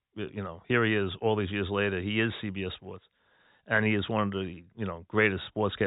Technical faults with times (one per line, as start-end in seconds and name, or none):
none